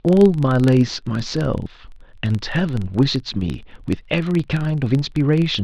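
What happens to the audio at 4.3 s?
At 4.3 s, as throughout the speech, the filter restarted on every block is audible: each block starts from silence, producing a small transient every 42.7 ms. This gives a steady 23.4 Hz buzz that tracks the speech level, which fits a 1024-sample block.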